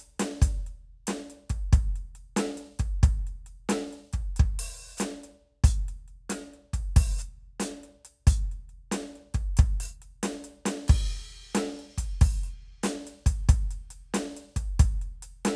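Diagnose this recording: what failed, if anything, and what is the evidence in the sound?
Nothing failed; no fault is audible in this music.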